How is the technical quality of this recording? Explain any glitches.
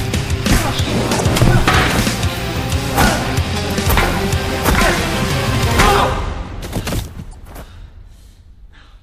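Three short glitches mar it, all the same problem: damaged data in a compressed stream at 1.17, 3.88 and 7.30 s, each about 44 ms. Corrupted bytes make the decoder lose sync and hunt for the next frame, so you get a brief chirp, squawk, click or short hole.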